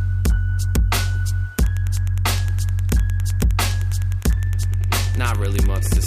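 From 1.57 s to the end, Wi-Fi interference ticks steadily every 102.4 ms. A nearby radio's beacons get rectified by the circuit, faint beneath the sound.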